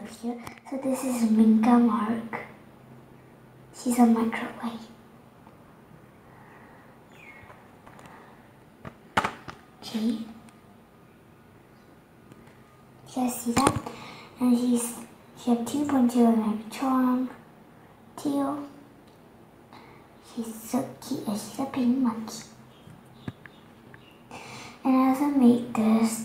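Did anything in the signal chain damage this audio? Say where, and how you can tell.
Yes: at the codec stage, compressed frames were skipped near 7.87 s, dropping about one 20 ms frame, so the audio jumps ahead.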